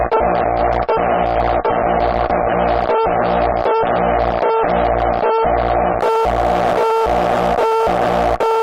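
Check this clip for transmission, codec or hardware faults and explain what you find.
One fault: an adaptive stream starting at a low bitrate. Until 6.0 s, nothing sounds above 5.5 kHz and artefacts are harsh. The player then switches up, gaplessly.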